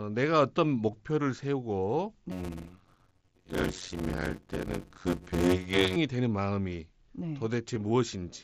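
At 0.91 s and again at 7.74 s there is a brief buzzy tone with a small warble as real audio returns. This is concealed Bluetooth headset packet loss: about 15 ms of audio went missing over the link, and the receiver covered it by repeating recent waveform.

From 2.31 to 5.96 s the speech takes on a steady buzz at about 92 Hz and drags at roughly half speed (0.533×) while staying near normal pitch. This is a block size mismatch (padded): each short written block, which fits 256-sample writes, is filled out with silence to a larger read size, inserting a gap every block.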